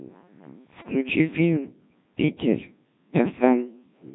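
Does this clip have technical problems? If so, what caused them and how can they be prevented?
Yes. The whole clip carries the sound of the Codec 2 vocoder. The speech is robotic and buzzy from start to end. Nothing reaches above 3.8 kHz. The damage is heavy, which fits the 1.3 kbit/s mode. A vocoder like this does not keep the waveform. It sends only pitch, voicing, energy and a rough spectral envelope. The decoder then rebuilds the voice from sine waves, which gives the synthetic tone. To prevent it, use a waveform codec at a higher bitrate.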